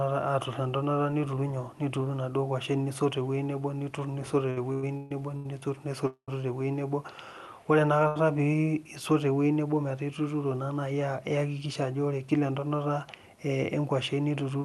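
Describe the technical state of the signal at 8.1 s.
At 8.1 s the speech shows a short stall from a late packet, running from 8.08 to 8.17 s. A packet arrived after it was due, the jitter buffer emptied, and the receiver stretched the last sound for about 79 ms until the data came in, then resumed from the same point. Nothing is lost, but that sound is held unnaturally long with a faint buzz or dip, and playback sits about 79 ms later afterwards.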